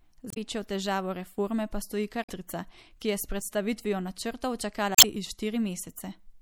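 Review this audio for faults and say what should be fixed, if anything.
Throughout, a heavily starved MP3 encoder, likely at a low bitrate around 64 kbps, has switched weak frequency lines on and off, leaving the speech watery and swirly with smeared consonants.

At 0.28–0.37 s, 2.21–2.30 s and 4.95–5.04 s, damaged data in the compressed stream throws the decoder off sync, producing short squawks or chirps while it searches for the next frame.

Prevent this by encoding at a higher bitrate and delivering the file over a checked, error-free transfer.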